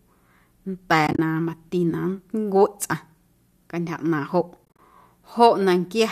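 AAC frame loss with muting happens twice. Groups of short codec frames went missing, and the decoder zeroed their spectrum. From 1.07 to 1.19 s, just before "na mati na", about 80 ms of audio drops out in scattered gaps, with the longest run only a few tens of milliseconds. From 4.65 to 4.79 s, about 100 ms is lost across a 140 ms span. The gap pattern fits 10 ms frames. Each hole fades out and back in softly, so the sound stutters briefly. A light graininess sits underneath, likely from low-delay AAC coding.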